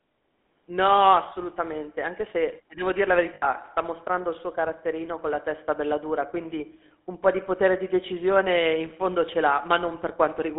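Speech comes through a buzzy, gravelly, narrow line from 200 Hz to 3.6 kHz, the plainly audible roughness of the GSM full-rate codec, which fits a 13 kbps stream. At 3.34–3.46 s, between "ti devo dir la" and "sta mostrando il suo", and at 6.88–6.91 s, after "testa bella dura quindi", the sound freezes into a short metallic ring. These are lost GSM frames, filled by repeating the last good frame.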